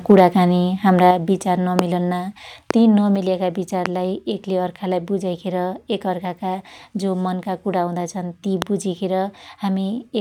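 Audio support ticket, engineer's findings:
Harsh, crackly edge on the loudest peaks, 0.10–0.21 s. Microphone overload, likely input gain set too high: peaks about 2 dB past converter full scale, tops flattened on a few percent of samples.

Sudden level drops at 0.12 s (about 2 dB) and 1.11 s (about 5 dB), background included. Microphone volume stepped down, likely call software's auto-gain cutting input after clipping.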